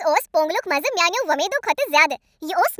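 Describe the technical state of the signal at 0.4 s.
At 0.4 s the speech is affected by a wrong sample rate, present for the whole clip. It plays about 1.45 times too fast and roughly 6.5 semitones high, which fits 22 kHz material played at 32 kHz. Because tempo and pitch rise together, this is not a pitch-shift effect.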